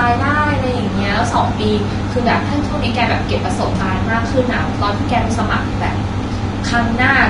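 From start to end the speech sounds hissy and grainy, with blurred consonant attacks. This is likely Vorbis compression at a low bitrate near 32 kbps, quantising treble detail into noise. A spectrogram shows a hard ceiling at 10.6 kHz and speckled, blotchy upper bands.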